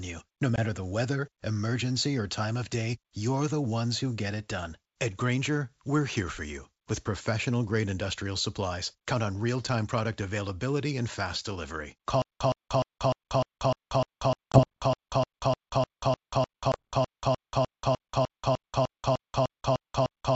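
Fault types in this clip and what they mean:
packet loss on an ADPCM call: at 0.56, 14.52 and 16.72 s, about one packet each time leaves a 20 ms silent hole, and the speech returns slightly distorted while the desynchronised predictor settles.
stutter with silent gaps: from 12.22 s to the end, a 117 ms fragment repeats every 302 ms with 185 ms of silence between, likely a stalled stream replaying its last buffer.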